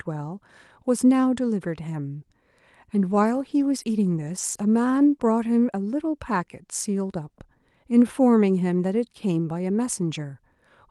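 Between about 3.11 and 5.27 s there's a run of 21 short lost packets rebuilt from error correction, each 20 ms. The decoder played the low-bitrate backup copies carried in the next packets, so nothing drops out, but the speech turns briefly rough and noisy in those spots.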